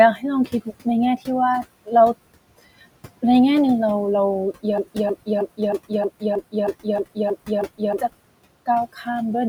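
A noise suppressor runs across the whole speech recording, pulling the bands it judges to be steady background down by about 20 dB frame by frame. The room noise, sitting about 18 dB below the speech, therefore dips in the gaps and comes back underneath the talking. That same gating misjudges speech twice and produces speech cut by the noise suppressor. Between 0.46 and 0.68 s it treats part of the talking as noise and ducks it by as much as about 13 dB for roughly a tenth of a second, and between 8.93 and 9.07 s it does the same, with a dip of about 15 dB over roughly 150 ms. In both places the affected sounds come out swallowed and faint. There is also a broken-record loop from 4.78 to 7.99 s, where a single 0.31 s fragment plays back exactly, end to end, ten times over. This most likely comes from the player or stream stalling and resending the last chunk it held. The stutter replaces three seconds of speech that never arrive, and the result is the same fragment repeating back to back.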